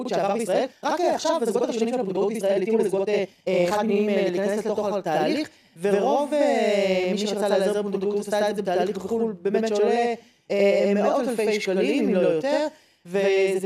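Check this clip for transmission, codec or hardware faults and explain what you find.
Two faults stand out: a doubling that runs through the whole clip, and a rushed stretch at the start.

Channel delay (doubling), throughout: one channel trails the other by about 85 ms, and once they're folded to mono you hear the late copy as a distinct slap right behind everything, at the same level. That gap fits a 4096-sample buffer at 48 kHz.

Time-stretched section, 0.0 to 4.0 s: the pace runs about 1.62 times fast while the pitch holds steady, so it comes across hurried. That's likely software squeezing the audio to fit a length, dropping short pieces to keep the pitch intact.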